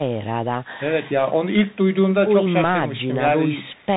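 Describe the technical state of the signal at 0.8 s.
Bluetooth CVSD headset codec damage is present at 0.8 s, as it is across the whole clip. CVSD codes the speech as a single up-or-down bit per sample at 64 kHz, with an adaptive step size, and nothing above 4 kHz survives. The damage is plainly audible: a granular hiss sits under the speech, s sounds turn scratchy, and loud high-frequency energy outruns the step size and distorts.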